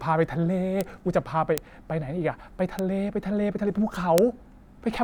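Four sharp, isolated ticks cut through the speech at 0.81 s, 1.58 s, 2.79 s and 4.18 s. The spikes were introduced at about -6, 0, -12 and 0 dBFS. Each is a broadband click with no relation to the surrounding signal. These are bit error spikes: a flipped bit throws a sample's value off by a power of two before it snaps back. The extreme brevity points to one corrupted sample in the first two and two consecutive ones in the last two.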